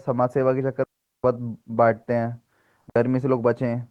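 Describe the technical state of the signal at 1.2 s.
At 1.2 s the speech sits in a clean hole of near silence, with no noise burst on either side, running from 0.84 to 1.24 s, about 0.4 s. This is a digital wireless dropout: the link lost too much data, so the receiver muted with a very short fade.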